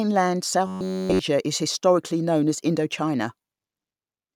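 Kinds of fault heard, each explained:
Robotic sound from repeated short buffers: speech becomes a fixed 94 Hz metallic buzz, likely an 11 ms buffer looping continuously, rather than the silent gaps of dropouts.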